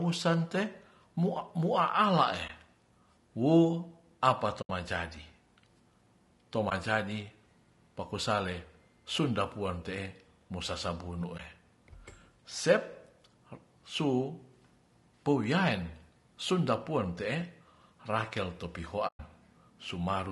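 Speech throughout sounds rough and grainy, with noise between harmonics and a synthetic-sounding top band, likely from low-delay AAC compression (AAC-ELD) at a low bitrate near 32 kbps. AAC frame loss with muting leaves brief dips and soft-edged holes where the decoder zeroed the spectrum: about 20 ms at 2.47 s, just after "mua'ala ee", 80 ms at 4.61 s, 20 ms at 6.69 s and 11.37 s, and 120 ms at 19.07 s.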